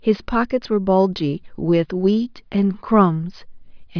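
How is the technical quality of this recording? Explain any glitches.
Nothing here stands out as a glitch; the recording runs without any dropouts, clicks or other interruptions to point to.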